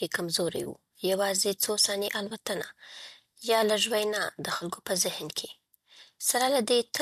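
Speech with three brief AAC frame loss with concealment events: at 0.64–0.67 s, at 2.30 s just after "څو ثانیې", and at 4.57–4.64 s between "وینا د" and "په ذهن". Each patch lasts about 10 to 40 ms, in steps that fit 10 ms low-delay frames, likely AAC-ELD at 64 kbps. Unlike a hard dropout, none goes silent: the decoder rebuilds the missing frames from the previous spectrum, so each gap comes out as a short smeared, noisy blur.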